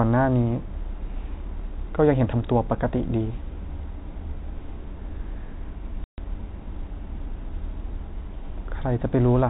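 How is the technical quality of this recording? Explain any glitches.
The speech has one glitch, heard over a telephone-band sound with nothing above 4 kHz. Packet loss filled with silence, 6.04 to 6.18 s: about 140 ms of data never arrived, consistent with seven 20 ms packets, and the receiver played a hard-edged gap of silence.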